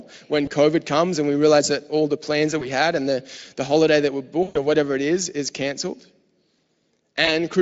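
A speech recording with VoIP packet loss concealed by the speech codec at 0.45–0.50 s, 2.59–2.67 s (between "all the plans that" and "had and the the"), 4.43–4.57 s (after "the holiday that we", before "or whatever it is") and 7.25–7.32 s. The decoder stretches the last pitch and filter into a buzzy tone or coloured noise that fades, and the smear outlasts the loss. The short events fit one lost 20 ms frame, the longest about six frames. This happens over light Speex coding at roughly 28 kbps.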